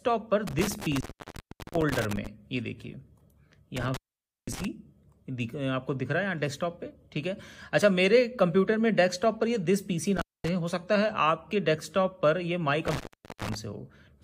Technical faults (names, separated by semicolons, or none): intermittent contact